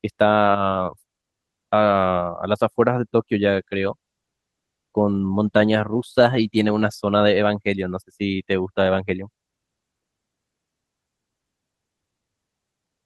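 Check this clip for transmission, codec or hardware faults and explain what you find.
One transmission fault stands out. A call bitrate drop runs from 3.52 to 8.27 s. The encoder's budget fell, with roughly 3.4 s at a floor near 15 kbps against 32 kbps, and bandwidth narrowed from 20 kHz to 12 kHz, so the speech turns coarse and duller.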